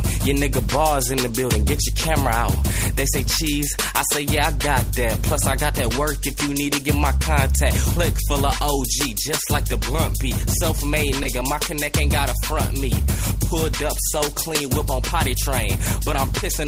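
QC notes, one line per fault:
11.23 to 11.27 s, short concealed packet loss: about 20 ms of audio never arrived in time, and the receiver covered 12 ms of that gap by extending the preceding sound, either by repeating its pitch period or by generating shaped noise, before crossfading back into the real signal. This produces a brief smear in the sound. On a spectrogram the harmonics or noise band would appear frozen and smoothed across the gap, and on the waveform as a short, over-regular stretch that blends into the surrounding signal.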